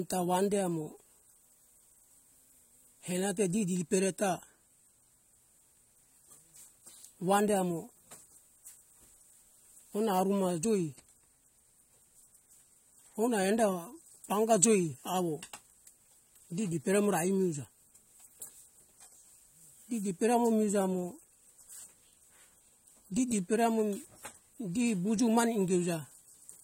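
From start to finish the speech is dull and smeared, with a warbling, fizzy texture on sustained vowels and sibilants, the mark of AAC compression, likely AAC-LC at a low rate that fits roughly 32 kbps. The encoder quantises frequency lines coarsely to save bits, so detail drops out. On a spectrogram nothing appears above 16 kHz, and below that cut-off the upper bands show patchy holes and blotchy fill instead of continuous texture.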